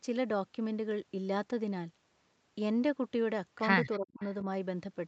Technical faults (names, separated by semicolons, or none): echo leak; speech suppressed in double talk